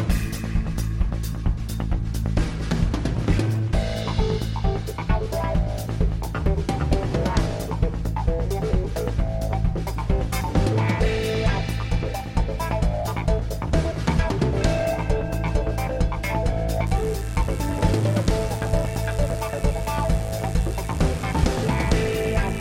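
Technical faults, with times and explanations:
16.87 to 22.60 s, mains buzz: a steady, raspy buzz enters and runs to the end, sitting roughly 20 dB below the programme. Switching spikes locked to the 50 Hz supply arrive twice per cycle, spreading harmonics up to several kHz and giving the edge.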